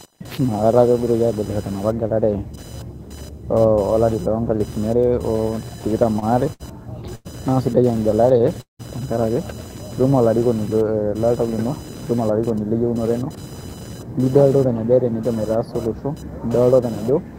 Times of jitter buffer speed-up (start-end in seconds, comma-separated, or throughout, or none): 12.14-13.30, 14.18-15.29